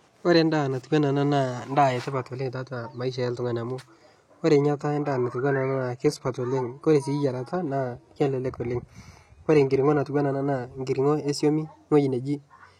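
From 4.55 s to 10.55 s the speech suddenly loses its natural treble, which turns hissy and synthetic, and a watery, smeared codec texture rises, with no gap at either edge. The drop comes just before "nkiring'o e suami". This is an adaptive stream at a lower bitrate: the connection slowed, so the player switched to a much leaner encoding, consistent with HE-AAC at around 20 kbit/s in place of roughly 96 kbit/s AAC.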